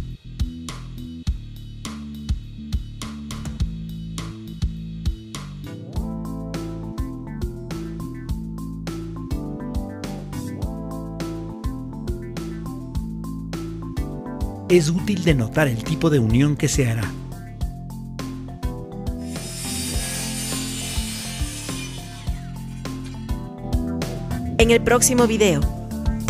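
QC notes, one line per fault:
No audible faults found.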